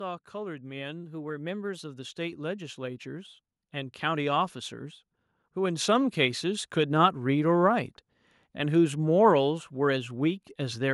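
From 0.31 s the automatic gain control decides the input is too quiet and keeps turning it up until about 7.23 s, so the speech and the room behind it swell together by roughly 14 dB over those seven seconds, a slow, steady creep rather than a jump.

Between 1.03 and 1.78 s the whole thing suddenly runs about 5.4% fast and sits roughly 91 cents sharp, nearly a semitone, then snaps back. That's likely a drift correction step, with clock-matching software changing the playback rate in one step to rebalance its buffer.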